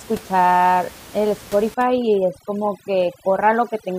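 From 1.74 s to the end, overdone noise removal sets in. The noise reduction is working far too hard, pushing individual frequency bands down or off whenever they sit close to its noise estimate. The room noise, about 21 dB below the speech until then, drops and breaks up into twinkling specks. Quieter parts of the speech are cut along with it.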